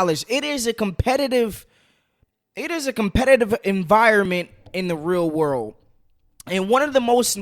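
At 4.25 s, just before "in the real world", overlapping segment timestamps at the 4 s boundary make the player discard 3 ms of speech, producing a tiny skip.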